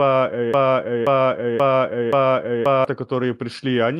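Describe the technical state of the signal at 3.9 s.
At 3.9 s the signal is intact, with no audible fault at that moment.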